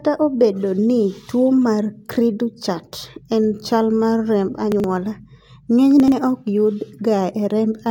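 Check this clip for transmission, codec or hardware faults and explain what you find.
The speech has a delivery-order fault at two points, from 4.72 to 4.84 s and from 6.00 to 6.12 s. These are chunks out of order. In each span a piece of audio about 40 ms long arrived or was written late and played after material that should have followed it, which fits a chunk landing two places behind. No sound is lost, but the sequence is scrambled. It leaves a brief jumbled stutter bounded by three hard joins.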